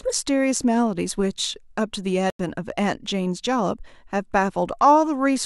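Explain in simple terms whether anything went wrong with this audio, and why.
Yes, something went wrong. At 2.30 seconds the speech suddenly drops out, leaving a short hole of silence that lasts until about 2.39 seconds, roughly a tenth of a second. The cut starts abruptly, and the speech picks up again right on time afterwards. This is a corrupt frame muted fault. A small chunk of the compressed audio was damaged, which fits a single bad frame. The player couldn't decode it, so it played silence in its place.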